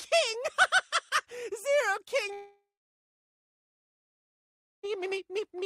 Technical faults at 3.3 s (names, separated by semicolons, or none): long network dropout